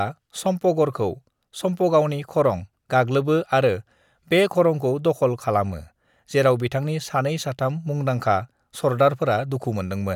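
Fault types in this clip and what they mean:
No technical faults can be heard in the recording; the speech signal stays continuous and stable throughout.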